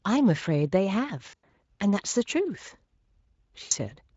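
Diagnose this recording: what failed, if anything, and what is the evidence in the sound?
VoIP packet loss concealed by the speech codec, a network fault, at 1.29–1.58 s and 3.63–3.73 s: the decoder extrapolates missing frames, smearing speech into fading buzz.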